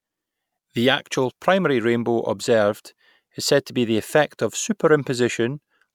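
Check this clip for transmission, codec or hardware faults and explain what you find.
I found no transmission, codec or hardware faults in this clip.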